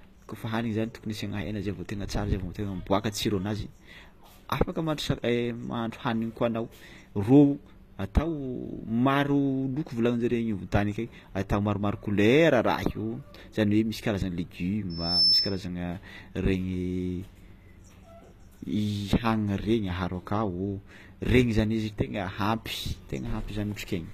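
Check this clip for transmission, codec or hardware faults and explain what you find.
Two faults are present: band-limited codec damage throughout the speech, and a brief feedback squeal near 15 s.

HE-AAC compression, likely, throughout: the treble is rebuilt from lower bands, so sibilants sound gritty and metallic, nothing passes above 14.9 kHz, and the damage fits roughly 24 kbps.

Loudspeaker feedback squeal, 14.90 to 15.67 s: a microphone hears its own loudspeaker, so a 5.3 kHz tone swells within about 0.3 s to some 5 dB above the speech.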